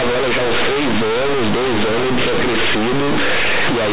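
Companded audio read as linear runs throughout the speech: mu-law bytes are played as plain 8-bit samples without expansion, so every sign change swings across half the range and quiet passages match loud ones, producing harsh, buzzy distortion and heavy noise in pauses, over an 8 kHz telephone-band signal.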